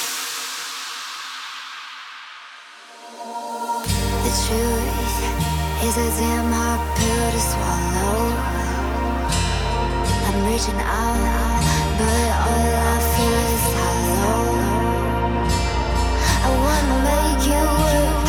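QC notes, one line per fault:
11.15 s to end: doubled audio track, an abrupt dry full-band copy roughly half a second late and about 5 dB down, likely from a slower second capture path.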